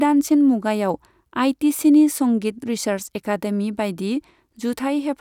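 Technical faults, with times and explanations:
No technical faults detected.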